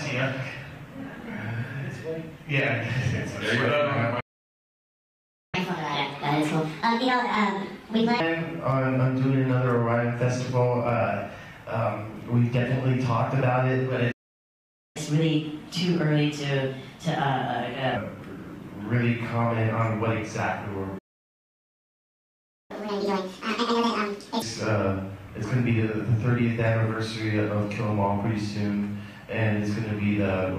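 Three playback stalls cut the sound dead at 4.20 to 5.55 s (1.33 s), 14.11 to 14.97 s (0.83 s) and 20.98 to 22.71 s (1.71 s). The likely cause is the player running out of buffered data. Each shows as a flat-line waveform and a blank vertical band on a spectrogram.

Each stall is followed by catch-up at higher speed as the player resamples its backlog. The sound runs at 1.5 times speed and about 7 semitones sharp from 5.55 to 8.20 s, and at 1.25 times and about 4 semitones sharp from 14.97 to 17.97 s. From 22.71 to 24.42 s it runs at double speed and nearly an octave sharp. On a spectrogram the harmonics jump upward and events compress in time, then drop back to normal.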